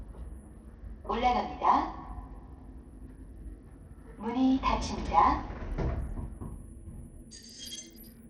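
Throughout the recording, the signal has likely passed through Bluetooth SBC compression at a very starved setting, consistent with roughly 80 kbps. With so few bits, the weak upper sub-bands receive almost nothing and the remaining bands are quantised coarsely. The effect on these sounds is plainly audible: the treble thins out and flickers in and out, while a gritty, grainy noise and aliasing cling to every event from start to finish.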